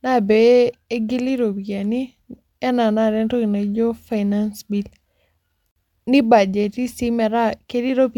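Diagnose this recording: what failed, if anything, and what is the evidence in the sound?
Gap at a join of encoded pieces, from 5.71 to 5.76 s: the speech drops out for about 48 ms and then resumes exactly where it stopped, with its edges smeared by the codec. This is a codec-stage failure. The audio was encoded in separate pieces of about 6 s each and joined without trimming, so the second encoder run's start-up delay and the first run's padded final frame both stayed in as silence.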